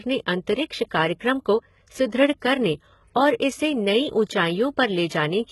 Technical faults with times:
0.00-5.52 HE-AAC compression

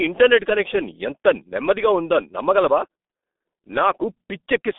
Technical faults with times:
0.00-4.79 G.723.1 codec

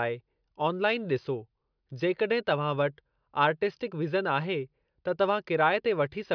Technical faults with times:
none

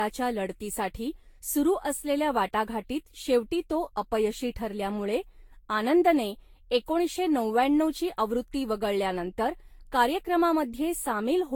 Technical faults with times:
0.00-11.56 generation loss

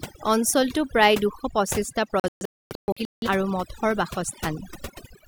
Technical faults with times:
0.00-5.28 overdone noise removal
2.20-3.28 digital broadcast dropout

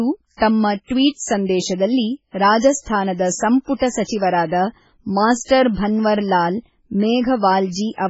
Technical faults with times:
0.00-8.10 MP3 compression

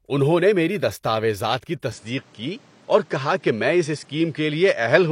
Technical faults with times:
1.92-5.12 input switched to a poorer device

